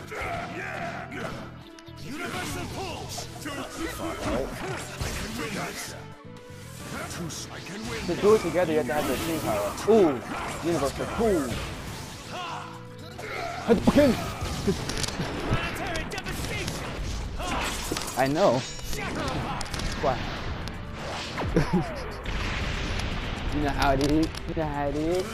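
No audible technical faults anywhere in the recording.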